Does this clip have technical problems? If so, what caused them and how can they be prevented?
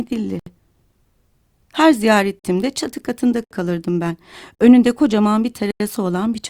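Yes: the speech drops into short holes of digital silence, cutting out and back with no fade. These are blocks of digital silence, where buffer-sized runs of samples became zeros.

They occur at 0.39–0.46 s (70 ms), 2.39–2.44 s (46 ms, just before "çatı katında kalırdım ben"), 3.44–3.51 s (65 ms), 4.55–4.59 s (46 ms, right after "çatı katında kalırdım ben") and 5.71–5.80 s (93 ms, after "kocaman bir"). The 46 ms and 93 ms gaps fit blocks of 2048 and 4096 samples, which suggests the program failed to fill its output buffer in time.

To prevent this, give the audio processing enough time or a larger buffer so that each block is ready before playback needs it.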